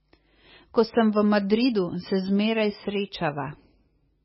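From start to finish the speech sounds watery and swirly, with nothing above about 5.5 kHz. This is likely heavy MP3 compression at a very low bitrate, around 17 kbps, which cuts the treble and zeroes weak frequency lines that flicker between frames.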